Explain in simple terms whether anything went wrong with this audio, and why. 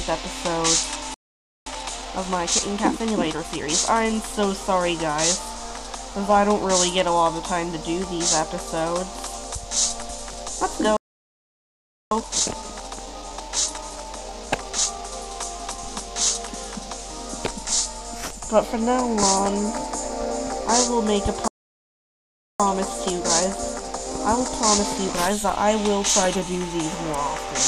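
The sound cuts to silence three times, a playback stall at 1.14 s (0.52 s), 10.97 s (1.15 s) and 21.48 s (1.12 s), likely because the player ran out of data.

Each gap is followed by time-compressed catch-up, where the audio plays hurried at normal pitch: 1.66 to 3.74 s and 12.11 to 15.11 s at 1.25 times speed, and 22.60 to 25.60 s at 1.1 times.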